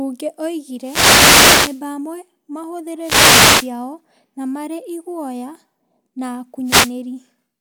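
Three wireless microphone noise hits break into the speech, at 0.78 to 1.84 s, 2.99 to 3.72 s and 6.64 to 6.94 s. Each is a swish of static. The FM radio link fades as reflections cancel, so receiver noise rises.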